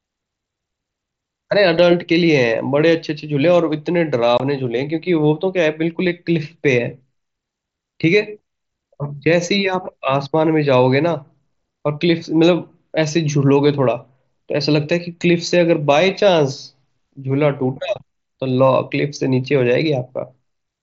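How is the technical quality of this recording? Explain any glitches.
A single glitch stands out on an mSBC wideband Bluetooth headset link, with a light grainy edge on louder speech. At 4.38 to 4.40 s, unconcealed Bluetooth headset packet loss drops about 22 ms of speech, which fits three lost frames. Silence or an idle pattern replaces them, leaving a brief hole with abrupt edges.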